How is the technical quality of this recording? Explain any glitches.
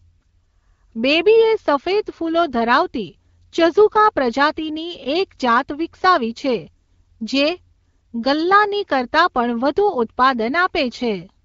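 No glitches can be heard anywhere in this speech.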